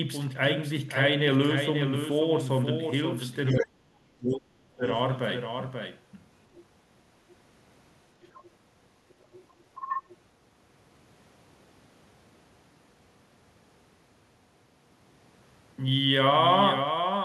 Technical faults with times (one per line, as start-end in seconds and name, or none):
0.00-17.25 doubled audio track
3.53-4.84 speech suppressed in double talk
6.56-6.61 other side's voice leaking through
8.24-8.46 other side's voice leaking through
9.21-9.39 other side's voice leaking through
9.81-10.14 other side's voice leaking through